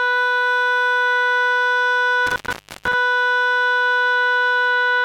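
Intermittent contact hits the music from 2.27 to 2.94 s, where a loose cable or plug briefly loses connection. The signal drops out for about half a second, leaving only faint hiss, with crackle marking the moments the contact breaks and then reconnects.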